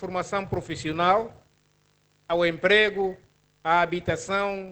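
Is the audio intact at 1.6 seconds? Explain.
No, at 1.6 s there is a steady 50 Hz buzz, present throughout, tracking the level: a filter restarted on every block, ticking at each 20 ms block start.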